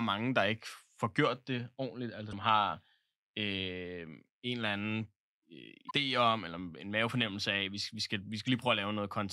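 At 2.29–2.33 s, just after "får gjort det ordentligt", then 5.87–5.91 s and 8.46–8.48 s, damaged data in the compressed stream makes the decoder misread frames and resynchronise, producing brief glitches.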